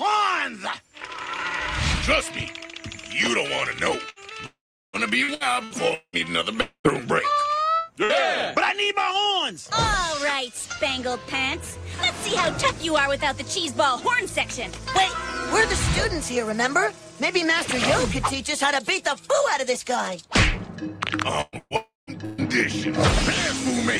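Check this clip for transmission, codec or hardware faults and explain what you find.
The clip shows network transmission faults of three kinds: repeated packet loss, long dropouts and one short burst of loss.

Repeated packet loss (robotic sound) runs from 4.09 to 6.16 s and from 21.41 to 22.41 s. The first stretch has five gaps, the longest 183 ms, with about 20% of the span concealed. The second has three gaps, the longest 128 ms, with about 36% concealed. Each hole is filled by stretching the last sound. The holes come close together. The audio turns choppy, with pieces missing.

Long network dropouts occur at 4.46 to 4.96 s, 6.61 to 6.87 s and 21.76 to 22.10 s. The missing audio runs to about 480, 240 and 300 ms. In each one the last sound carries on briefly as a fading buzz or hiss. It then gives way to silence lasting about 380, 80 and 160 ms. The audio returns later, without the lost part. 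The likely cause is that no packets arrived for the whole gap.

A burst of packet loss occurs at 8.04 to 8.12 s, with about 60 ms missing. A few packets in a row were lost or arrived too late to play. The receiver held the last sound and faded it across the gap. The result is a brief held buzz or hiss. The audio then picks up slightly further on, and the short section in between is gone.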